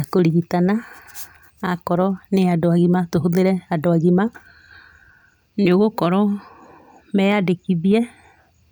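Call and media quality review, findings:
Nothing stood out on listening to the speech in this clip.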